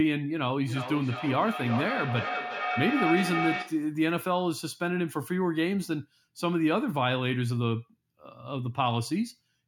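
From 0.6 to 3.97 s the speech returns roughly every 0.4 s, thin and ringing, its loudest repeat only about 3 dB under the direct speech. This is feedback echo between two devices: one plays back the other's microphone, which picks it up again beyond its own echo canceller's reach.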